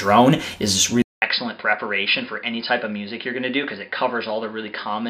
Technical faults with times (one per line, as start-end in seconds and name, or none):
1.02-5.09 input switched to a poorer device